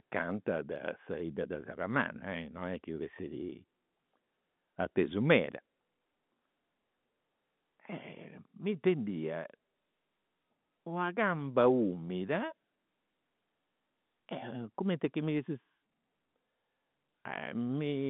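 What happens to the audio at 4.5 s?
Nothing goes wrong at 4.5 s: the speech there is intact, carried on the G.711 telephone line with its usual narrow band of roughly 150 Hz to 3.6 kHz.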